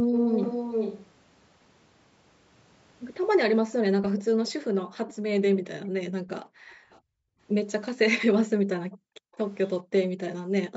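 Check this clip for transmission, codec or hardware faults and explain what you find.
Two call-path faults affect this speech clip: echo leak and background gating by the echo canceller.

Echo leak at 0.13–1.06, 4.18–4.51, 6.7–6.99, 8.91–9.68 and 10.29–10.35 s: a copy of the voice trails by 431 ms, strongest at first, about 5 dB under the speech, then much fainter. This is likely loudspeaker pickup the far side's canceller failed to subtract.

Background gated by the echo canceller at 3.66–7.4, 8.97–9.33 and 10.09–10.2 s: the canceller clamps the microphone while its loudspeaker plays, so room sound drops by up to about 40 dB, roughly one and a half seconds in total within the first span. The band stops at 8 kHz, as expected from the call microphone processing.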